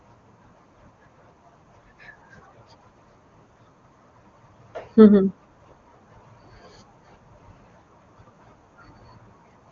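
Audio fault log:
No faults logged; the speech is carried over the AMR wideband (HD Voice) codec at 23.85 kbit/s, its top rate, with coding damage faint at most.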